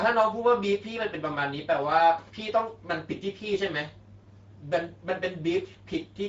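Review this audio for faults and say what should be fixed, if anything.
Speex codec, throughout: the CELP coder starves its excitation of bits, so speech turns hoarse and noisy, and nothing remains above 7.7 kHz. Re-source the original recording, or encode it with a modern codec such as Opus at a higher bitrate.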